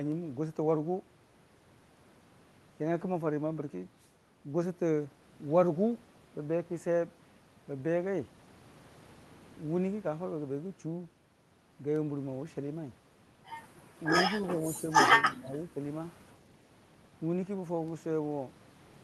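Speech suppressed in double talk, from 15.37 to 15.78 s: for roughly 0.4 s the talker's speech sinks by around 15 dB. This is likely the echo canceller failing to tell the near talker apart from the far side's loudspeaker echo while both spoke at once, so it attenuated everything. The surrounding call audio has the high-end roll-off of a codec path limited to about 12 kHz.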